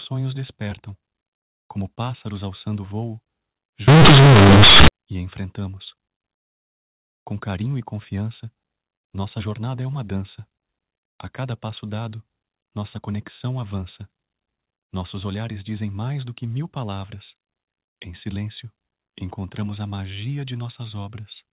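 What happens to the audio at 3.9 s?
At 3.88 s the speech breaks into companded audio read as linear, lasting one second until 4.88 s, just before "e enfrentamos". The telephone-style mu-law bytes are played as plain linear 8-bit samples, with no expansion back to their true levels. Every sign change throws the output across about half its range. Quiet and loud parts end up equally large, and the waveform is badly bent. It comes out as a very loud, harsh buzz, with heavy noise filling the pauses.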